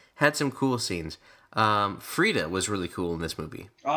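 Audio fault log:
throughout: crude rate conversion; unfiltered linear interpolation, fitting a 32 to 44.1 kHz change, leaves an inharmonic fizz about 25 dB down on bright sounds.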